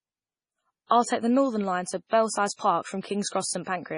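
Throughout, the speech sounds watery and swirly, with chirpy, metallic s sounds and nothing above about 10.5 kHz. That points to MP3 compression, likely at a starved bitrate around 24 kbps, so the encoder cut the treble and let weak frequency lines flicker between frames.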